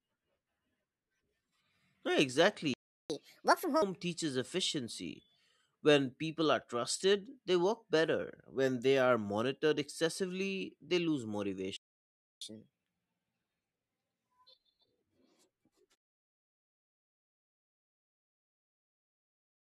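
At 2.74 s the player likely ran short of buffered data or had its output thread blocked, and the speech cuts off mid-flow in a playback stall lasting about 0.36 s. The gap is plain dead silence with no tail, and when the sound returns it carries on from where it stopped rather than skipping ahead.

From 3.10 to 3.82 s the player works off that backlog by resampling, a catch-up at higher speed. Played 1.5 times fast, the speech is hurried and lifted by about seven semitones, giving a chipmunk-like brightness before it drops back to normal pace and pitch.

A second stall begins at 11.76 s, again likely from a starved buffer or a held-up thread, and this time the silence runs longer, about 0.65 s, a clearly noticeable break in the flow.

The following catch-up, from 12.41 to 15.02 s, is gentler but longer. At 1.25 times speed the pitch rises by about four semitones, so the speech sounds slightly rushed and raised for over two and a half seconds before settling.

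From 15.94 s to the end, the fade stage keeps too few bits and adds no dither, which fits an effective word length of about 11 bits. This causes truncation distortion on a fade. As the level sinks toward the smallest step the waveform collapses into coarse square steps. From 17.2 s to 19.79 s the tail turns gritty instead of thinning away cleanly.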